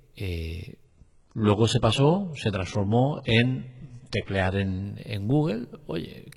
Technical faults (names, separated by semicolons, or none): adaptive stream at a lower bitrate